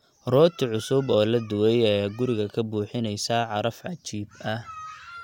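No technical faults are audible anywhere in this recording.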